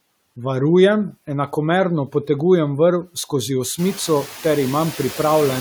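Noise suppressor artifacts run through the whole speech clip. The suppressor judges each frequency band, frame by frame, and pulls down whatever it takes for steady noise. Here it cuts that noise by about 17 dB. The background drops away in the gaps between words. It comes back up underneath them. From about 4 s the room noise grows by roughly 14 dB, sitting about 19 dB below the speech, so that pumping gets easier to hear.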